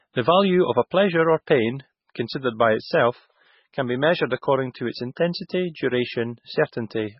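A speech clip with MP3 compression damage running through the whole recording. Everything above 5.6 kHz is gone, so s sounds lose their hiss and the sound turns dull and watery, with a swirling, chirpy texture as weak frequency detail drops in and out from frame to frame. The heavy damage likely comes from a very low bitrate, around 16 kbps. On a spectrogram there is a flat ceiling at 5.6 kHz, with patchy, flickering holes below it.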